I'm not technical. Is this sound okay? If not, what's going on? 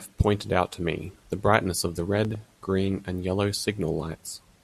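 No. A loud pop sounds at about 2.25 to 2.37 s: two sharp pops in quick succession, louder than the speech, which carries on underneath. This is likely a sudden electrical jolt, such as a plug, switch or static discharge, briefly added to the signal.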